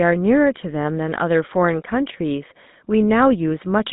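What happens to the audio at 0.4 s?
At 0.4 s the speech carries GSM full-rate codec damage, present across the whole clip rather than starting there. The codec models the vocal tract and excites it with a regular pulse train built from a decimated residual, so fine detail is rebuilt coarsely. The result is a plainly audible buzzy, gravelly roughness. The band runs from about 150 Hz to 3.7 kHz, with nothing above 3.8 kHz, and the roughness fits a 13 kbps coding rate.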